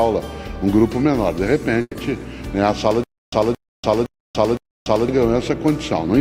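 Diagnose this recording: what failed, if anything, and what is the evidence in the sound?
Call audio freeze at 1.81 to 1.97 s, likely a network jitter-buffer underrun: 140 ms of smeared, fading fill, then 30 ms of flat waveform, and later audio runs 140 ms late.

Stutter with silent gaps from 3.04 to 5.08 s, likely a playback stall: the same 223 ms burst repeats four times every 512 ms, separated by 289 ms of flat digital silence, and that audio is lost.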